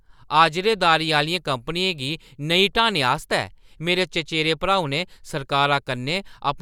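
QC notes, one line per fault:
No faults to note.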